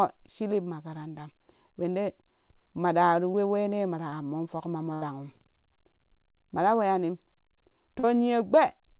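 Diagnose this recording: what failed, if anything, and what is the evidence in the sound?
The network dropped three short stretches of packets, causing short concealed packet loss at 3.32 to 3.36 s, 4.10 to 4.14 s and 8.00 to 8.05 s. Each time the decoder had no audio to play and filled the hole by extending the last sound, about 16, 20 and 37 ms of fill, before blending back. Each is heard as a brief smear or wobble in the speech, and the 8.00 s one is the longest.

A burst of packet loss occurs from 4.94 to 5.04 s, where several consecutive packets failed to arrive in time and about 80 ms of speech is gone. The receiver kept continuing the preceding sound and faded it as the gap went on, giving a held buzz or hiss that dies away. The speech then resumes further along, with the intervening material missing. This telephone-band call path, with nothing above 4 kHz, fits G.711 coding.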